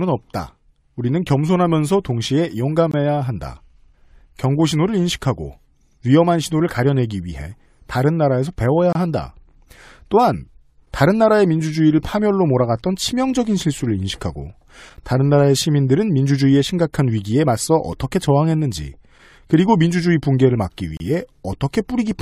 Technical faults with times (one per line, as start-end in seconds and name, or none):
2.91-2.94 gap between stream segments
8.93-8.95 gap between stream segments
14.97 gap between stream segments
20.97-21.00 gap between stream segments